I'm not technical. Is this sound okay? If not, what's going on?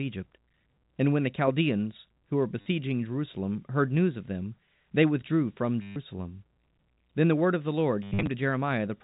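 No. Three times the speech stutters because of packet loss with last packet repeated. Bits of the audio went missing in transit, and the player filled each gap by replaying the last piece it had. You hear it at 2.61 s after "who were" (50 ms), at 5.82 s after "them they withdrew from" (140 ms), and from 8.03 to 8.27 s after "the word of the," where 170 ms is lost in patches. That buzzy, robotic repeat fits 10 ms packets.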